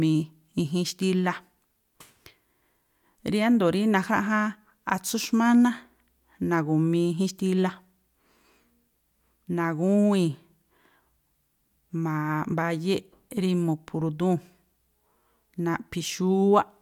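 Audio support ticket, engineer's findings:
Listened through the speech recording and nothing stood out as a fault.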